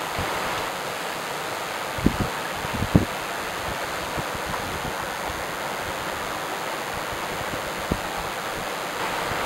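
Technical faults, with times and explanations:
Throughout: DECT cordless phone buzz. A nearby DECT handset or base station sends a short radio burst every 10 ms, and the audio circuitry rectifies these bursts, giving a steady, thin buzz at a 100 Hz repetition rate, sitting around 10 dB below the main sound. Unlike mains hum, which is a smooth tone with energy mostly in the low harmonics, this buzz comes from pulses, so its many harmonics reach far up the spectrum and sound raspy rather than rounded.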